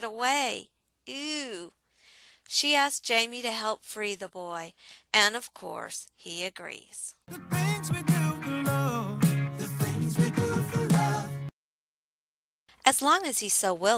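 No technical faults are audible.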